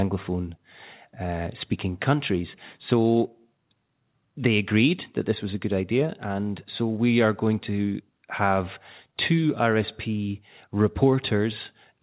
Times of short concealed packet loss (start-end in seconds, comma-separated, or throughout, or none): none